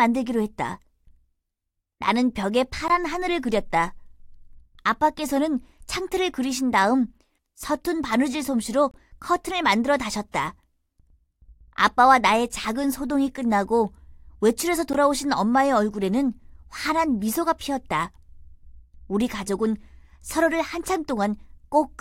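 Gaps between stream segments at 2.88 s, 8.91 to 8.94 s and 14.93 s: hard-edged silent dropouts every 6 s, where segment timestamps don't quite meet.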